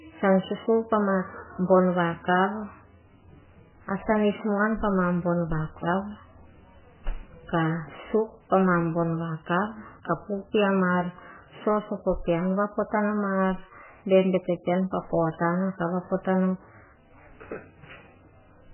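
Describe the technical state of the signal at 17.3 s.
At 17.3 s the speech carries the same heavy damage heard throughout the clip, likely from MP3 compression starved of bits, consistent with roughly 8 kbps. Nothing survives above 3 kHz, and weak frequency lines drop in and out between frames, leaving a watery, swirling texture with smeared onsets.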